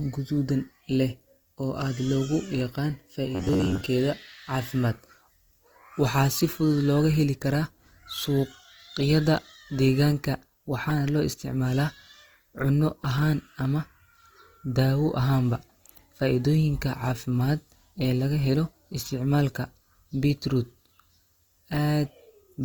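Throughout, the speech sounds grainy and rough, likely from Opus compression at a rate that fits about 24 kbps; the bandwidth stays full, without MP3's swirling holes.

From 3.35 to 3.87 s, just after "oo aad loogu yaqaan", the voice turns into a rigid metallic buzz at 93.8 Hz. This is likely robotic sound from repeated short buffers: about half the audio is replaced by repeats of roughly 10.7 ms. The fixed pitch sets it apart from codec roughness.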